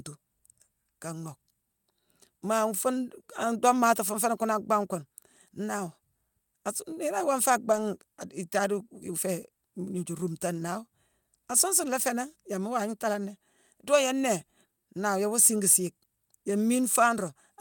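At about 7.71 s, running to 7.77 s, there's a lost packet rebuilt from error correction. A short stretch of the speech went missing in transit, which fits a couple of 20 ms packets, but the packets that followed carried low-bitrate backup copies, and the decoder played those instead. So you don't get a dropout, just a brief rough, noisy patch of roughly 40 ms where the speech sounds coarser before it snaps back to full quality.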